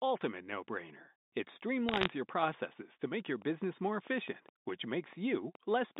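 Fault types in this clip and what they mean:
Bit errors on a digital phone line: between 1.89 and 2.07 s a short burst of sharp ticks breaks into the speech, roughly one bit in two hundred flipped on a line that sounds like 8 kHz mu-law telephone coding at 64 kbps. Each flip corrupts a single sample, so the ticks are scattered and irregular. That is what separates them from a steady click train. The voice between the ticks is left unchanged.
Train of clicks: from 3.42 s to the end at about 5.98 s, around fifteen clicks of near-identical shape arrive evenly, about 4.7 per second, peaking roughly as loud as the speech itself. They tick on through pauses too. The regular pacing most likely comes from interference from nearby equipment or a faulty connection or power supply injecting pulses.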